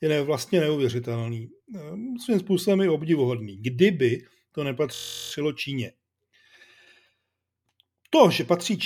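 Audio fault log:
4.95 to 5.32 s, system hang loop. The system stalled while the sound hardware kept replaying one short stretch of its buffer. A 23.2 ms slice repeats 16 times at about 43 Hz. That fits a 1024-sample buffer. It heard as a steady buzz. No audio is lost around it.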